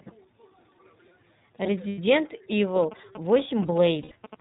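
The speech runs through the iLBC codec from start to finish. Nothing above 4 kHz survives, and the damage is plainly audible as a slightly rough, synthetic edge on every syllable. The sound fits iLBC's 30 ms frame mode at about 13.3 kbps. Because each frame's excitation is coded independently, the roughness stays even and grainy rather than smearing or warbling, which sets it apart from the swirly artefacts of transform codecs.

From 1.89 to 1.99 s come lost iLBC frames. A 90 ms stretch, consistent with three missing 30 ms frames, is filled by the decoder repeating the last pitch cycle with added noise. The result is a held, faintly buzzy vowel. Unlike a plain dropout there is no silence, and unlike codecs that carry state between frames, the speech sounds right again immediately after the gap.

GSM signalling bursts start at 2.83 s and last until 4.35 s. A nearby 2G phone in its signalling state sends short groups of radio bursts, and the audio circuit rectifies them into a galloping dit-dit-dit of brief 217 Hz buzzes. 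They sit roughly 15 dB below the speech. The clustered, rhythmic grouping distinguishes this from steady mains hum, which would be a continuous tone.

A second case of lost iLBC frames falls inside that interference, from 4.02 to 4.14 s. It is again 90 ms long and again bridged by a repeated, breathy pitch cycle. The speech recovers at once afterwards.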